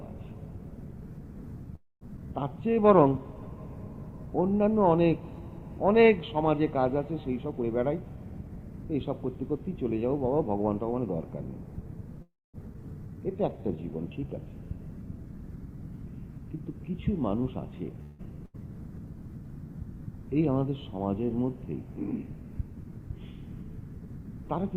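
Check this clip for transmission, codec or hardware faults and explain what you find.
The clip has network and jitter-buffer faults: three freezes, two skips, two slow-downs, two speed-ups and one burst of packet loss.

Call audio freeze at 1.75–2.03 s, 12.22–12.56 s and 18.03–18.24 s. The last sound is stretched into a fading buzz or hiss, with fills of about 0.26 s, 0.32 s and 0.16 s in all. The first two fall to silence for 170 ms and 230 ms. The likely cause is packets held up long enough to empty the jitter buffer. When playback resumes, nothing is missing. That sets a freeze apart from packet loss: a pause is inserted, but no content disappears.

Skip ahead at 2.17–2.19 s and 12.74–12.76 s. Playback jumps forward almost seamlessly, dropping about 100 ms and then about 150 ms. Audio was discarded while later material was already queued. Each of these skips follows a freeze and takes back part of the delay that freeze had added. 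Unlike a loss burst, a skip has no fading fill over the join.

Jitter buffer slow-down at 2.20–3.24 s and 13.07–14.28 s. The sound runs at 89% and 88% speed, adding 126 ms and 153 ms. Single pitch periods were repeated to rebuild the buffer's reserve. Sounds drag at unchanged pitch, which separates this from a freeze's static hold.

Jitter buffer speed-up at 7.40–9.11 s and 15.18–18.00 s. The sound runs at 115% and then 106% speed, with about 300 ms and then about 150 ms removed. Short pitch-period pieces were cut repeatedly to trim excess delay. The result sounds hurried at the same pitch. Unlike a skip, this is gradual compression rather than one jump.

Burst of packet loss at 18.45–18.56 s. About 80 ms of audio is missing and replaced by a brief fading continuation of the preceding sound before playback resumes further on. Unlike a freeze, this fill covers content that never arrives.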